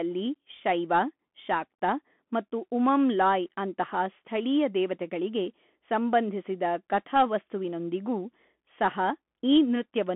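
From start to finish the speech shows a Bluetooth CVSD headset codec: a band of about 200 Hz to 3.4 kHz, nothing above 3.8 kHz, and one-bit slope coding, consistent with a 64 kbps link, that leaves plainly audible granular roughness and scratchy sibilants.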